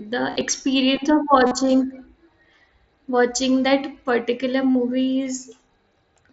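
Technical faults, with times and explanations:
0.30–0.41 s, 1.47–1.51 s and 4.72–4.75 s, concealed Bluetooth headset packet loss: headset packets dropped, and the receiver filled each gap by repeating the best-matching stretch of the last 20 milliseconds or so of waveform, leaving brief buzzy held tones with a slight warble as real audio resumes.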